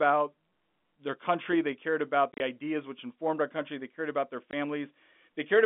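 Packet loss filled with silence cuts the speech at 2.34–2.4 s, after "country they cared about", and at 4.51–4.53 s, after "they cared about their". The gaps fit 10 ms packets, showing as flat waveform breaks with sharp vertical spectrogram edges.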